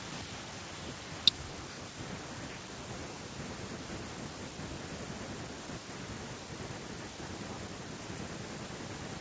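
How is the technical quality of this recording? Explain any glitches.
No technical faults are audible.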